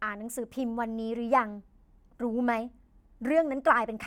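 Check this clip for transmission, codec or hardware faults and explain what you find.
No fault can be heard anywhere in this speech recording. There is nothing to report at any point in it.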